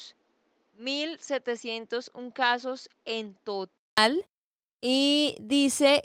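From the start until 3.98 s, the speech sounds dull and boxy, with nothing above 7.6 kHz. It is roughly 10 dB quieter and carries a different background noise about 40 dB below the signal. At 3.98 s a short gap of about 200 ms opens, and the sound then turns fuller and brighter. The likely cause is an input switched to a poorer device: the recording began on a narrower-band input and changed over to the better input at that point.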